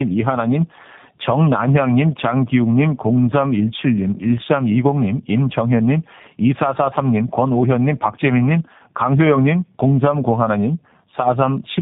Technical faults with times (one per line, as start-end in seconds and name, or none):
0.00-11.82 tandem speech coding